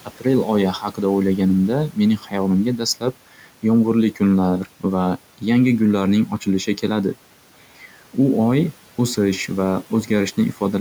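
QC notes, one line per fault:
0.05–0.25 s, 0.79–1.00 s, 2.18–2.34 s: speech cut by the noise suppressor. The suppressor misread quiet parts of the speech as background and turned them down, by about 12, 11 and 10 dB at worst. Roughly 0.10, 0.10 and 0.15 s of the respective windows sound swallowed and faint.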